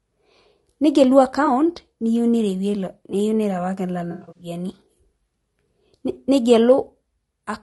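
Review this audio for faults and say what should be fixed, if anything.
The speech has a rough, grainy texture from start to end, with noise filling the gaps between harmonics and a thin, synthetic-sounding top band. This is likely low-delay AAC compression (AAC-ELD), whose short frames resolve pitch poorly; the damage fits a rate around 32 kbps. Raising the bitrate or switching to a longer-frame codec mode where latency allows would prevent it.

AAC frame loss with concealment appears twice. At 1.45–1.48 s there is a brief smeared, noisy patch, consistent with one lost frame patched from the previous spectrum. From 4.11 to 4.47 s losses cluster, the longest run around a tenth of a second, giving phasey smearing and a dip toward silence. Packet-loss protection such as forward error correction or redundancy on the transport would prevent it.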